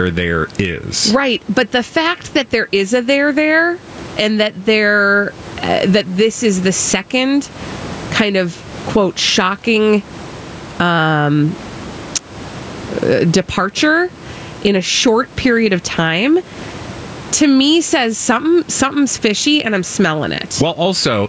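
Speech, through call microphone processing that leaves nothing above 8 kHz, with room noise about 31 dB below the speech, shows gain pumping throughout. The level swings by around 15 dB, with gain pulled down on loud sounds, which squashes loud and soft parts together. The likely cause is input gain set far too high, with a fast limiter or compressor clamping it. On a waveform the envelope looks flattened and dips after each loud onset. On a spectrogram the band energy rises and falls in step with that gain.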